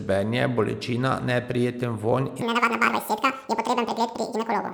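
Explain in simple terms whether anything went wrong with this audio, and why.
From 2.42 s to the end at 4.74 s, right after "bolečina neprijeten vonj", the speech suddenly races at twice the speed and jumps a full octave higher, like a chipmunk. This is audio read two samples at a time (double speed): the player treated each pair of samples as one, so everything plays double-fast.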